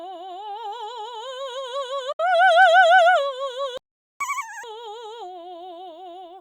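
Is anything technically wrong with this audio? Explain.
Yes, the music has three faults.

From 2.12 to 2.20 s there is a digital broadcast dropout. The receiver stopped getting valid frames and muted, fading out in about 8 ms, and roughly 64 ms of music is simply missing, which fits two lost frames.

From 3.77 to 4.21 s a playback stall leaves about 430 ms of silence mid-phrase. The likely cause is the player running out of buffered data or its thread being blocked, so output stopped until it recovered.

From 4.21 to 4.64 s comes catch-up at higher speed. The player resampled its backlog at 2.0 times normal speed to regain the lost time, so tempo doubles and pitch jumps by about 10 semitones before dropping back to normal.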